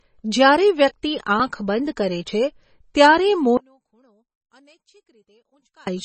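From the start the speech carries heavy MP3 compression, likely at a low rate such as 24 kbps: nothing remains above 8.3 kHz, and weak frequency lines flicker on and off, giving a watery, swirly texture and smeared attacks. The swirl is what separates it from a plain low-pass filter.

From 3.57 to 5.87 s the sound collapses by about 37 dB, likely because one stereo channel was inverted and cancelled its twin in the mono sum. A small residual copy remains audible, which distinguishes it from a true dropout to silence.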